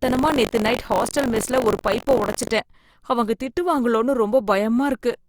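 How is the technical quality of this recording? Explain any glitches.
The recording has one clear fault: buffer tearing across the first part of the speech, from the start to 2.52 s. The write and read positions of the audio ring buffer have drifted into each other, so every period contains about a tenth of stale audio, roughly 40 ms old, spliced in with hard edges. The splices repeat at 46.9 Hz, consistent with a 1024-sample buffer, and they overlay the speech with a steady robotic buzz that sounds only while signal is present.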